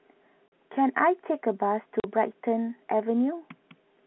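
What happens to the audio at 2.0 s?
At 2.00 s the sound drops out for 40 ms, to 2.04 s, a case of packet loss filled with silence. A gap that length fits two consecutive 20 ms packets going missing, with the receiver inserting digital silence instead of concealing the hole. The waveform falls abruptly to a flat line and resumes just as abruptly. On a spectrogram this shows as a blank vertical band across the narrow telephone band, bounded by thin broadband streaks at each edge.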